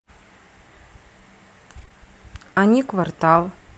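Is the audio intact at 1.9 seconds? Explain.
No. Right at 1.9 seconds there's short concealed packet loss, running 1.89 to 1.92 s and directly following another from 1.85 to 1.89 s. Each time about 20 ms never arrived, so the decoder stretched the preceding sound to cover the hole. You hear a brief smear or wobble there. Just before that, from 1.77 to 1.83 s, two lost packets were rebuilt from error correction: about 40 ms was played from the low-bitrate Opus copies carried in the following packets, so there's no gap, just a rougher, noisier patch.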